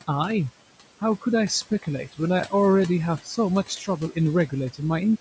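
From start to finish the speech carries overdone noise removal. The denoiser was pushed so hard that any frequency band sitting near its noise estimate is driven almost to nothing, taking the softer parts of the voice with it. The pauses collapse into near silence dotted with twinkling specks. That hollowed, sparkling emptiness sets it apart from ordinary gating, which simply mutes the gaps cleanly.

Running alongside it for the whole clip are noise suppressor artifacts. Frame by frame, the suppressor pulls down whatever bands it judges to be steady noise, cutting the room noise by about 17 dB. The room noise itself sits about 17 dB under the speech and belongs to the recording. As a result the background dips between phrases and swells back up beneath them. Unlike the overdone removal, this is a pumping, moving residue rather than specks over silence.

From 3.68 to 3.88 s comes speech cut by the noise suppressor. 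Here the suppressor mistook part of the voice for noise and lowered it by up to about 9 dB, for roughly a tenth of a second in total. That stretch sounds swallowed and faint. This is a brief loss in the speech itself, not a change in the background.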